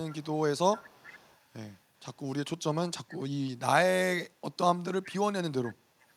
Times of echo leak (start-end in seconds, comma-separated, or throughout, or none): 0.09-0.26, 0.71-1.79, 5.03-5.09, 5.66-5.71, 6.00-6.09